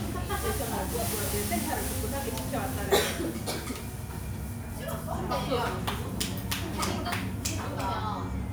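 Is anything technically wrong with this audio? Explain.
No, nothing technically wrong stood out on listening to this audio.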